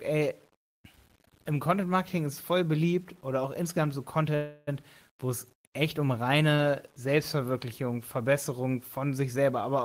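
Across the whole recording runs a grainy distortion that follows the speech: quiet syllables and word tails turn gritty and sputter rather than fading smoothly. This is low bit depth without dither. The level of the grit, roughly 35 dB below the signal, fits audio rounded to about 8 bits. On a waveform, low-level passages look like coarse stair-steps. On a spectrogram, broadband hash appears only where sound is present and vanishes in true pauses.

From 4.35 to 4.69 s, just after "oder auch insgesamt so", a call audio freeze occurs, likely caused by held-up packets emptying the jitter buffer. For about 0.32 s, the receiver stretches the last sound into a fading buzz or hiss. The speech then resumes exactly where it stopped, so nothing is lost, but everything after is pushed 0.32 s later. On a spectrogram, this shows as smeared, repeating horizontal bands. On the waveform, it is a decaying stretch.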